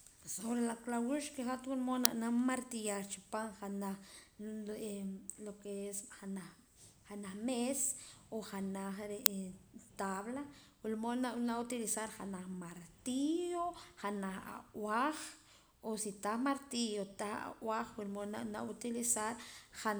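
At 2.05 s and again at 9.26 s, a brief, loud crack cuts through the speech. This is an uninitialised buffer: a block was played before audio was written into it, so stale memory came out as samples. Each crack lasts about 2.7 ms, which fits a 128-sample buffer.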